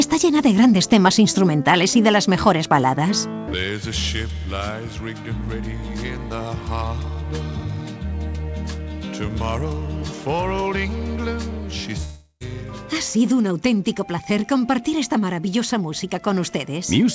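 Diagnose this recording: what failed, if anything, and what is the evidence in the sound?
At 12.04 s the sound smears into a buzzy tail that fades toward silence, then resumes abruptly at 12.43 s with a stretch missing. This is likely a long network dropout: packets stopped arriving, and the receiver's concealment extended the last sound until it ran dry.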